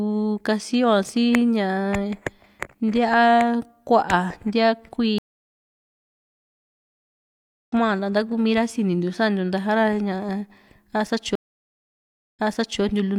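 Speech with two stream reconnects. At 5.18 s the audio stops for 2.5 s. It returns at 7.73 s roughly two seconds further on, skipping material. At 11.35 s it falls silent for 1.0 s. At 12.82 s it resumes 0.47 s earlier, repeating material. Each time, the connection dropped and a fresh decoder restarted mid-stream.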